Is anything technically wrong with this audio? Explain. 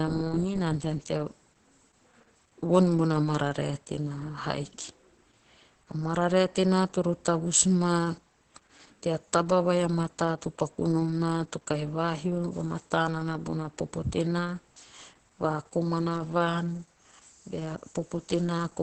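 Yes, the speech carries Opus voice compression throughout: a low-bitrate, roughly 10 kbps, SILK-mode wideband encoding whose linear-prediction coder quantises the excitation coarsely, leaving nothing above 8.3 kHz and heavy damage that makes the speech muffled, hoarse and faintly robotic.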